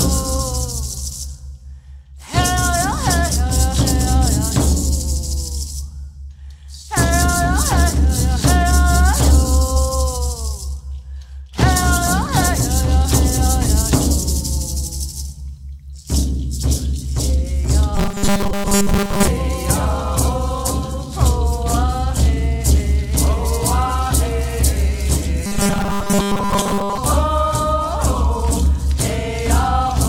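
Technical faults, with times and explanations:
17.95 to 19.27 s and 25.46 to 26.98 s, robotic sound from repeated short buffers: in both stretches the audio becomes a rigid, metallic buzz at 200 Hz that only roughly follows the underlying sound. The likely cause is new audio arriving too seldom, so the playback fills the gaps by looping the last 5 ms chunk over and over for most of each stretch, skipping the real signal.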